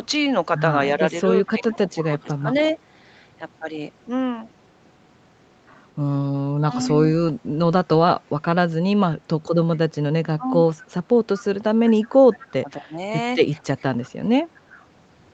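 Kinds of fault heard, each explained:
Speech suppressed in double talk: The level dips repeatedly while the other party is talking, most likely because the echo canceller could not tell the near talker from loudspeaker echo and turned both down. It occurs from 0.95 to 2.46 s, at 6.6 to 6.9 s, from 9.89 to 10.58 s, and from 11.87 to 14.79 s. Drops reach about 15 to 20 dB. The last stretch is the worst, with around two seconds of it pulled down.
Echo leak: A faint delayed copy of the speech follows the talker, arriving 228 ms late at about 25 dB below the direct sound. It most likely comes from a loudspeaker endpoint whose echo canceller let part of its microphone pickup through and sent it back. It appears as two brief scraps, at 2.58 to 2.73 s and at 6.88 to 6.94 s. Both sit at or just after suppression episodes.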